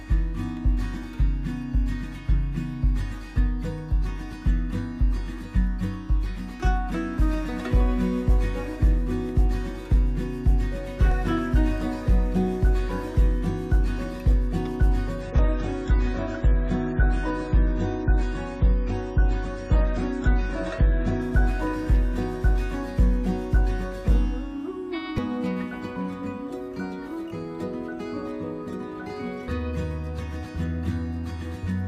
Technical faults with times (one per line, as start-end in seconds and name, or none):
15.21-21.21 adaptive stream at a lower bitrate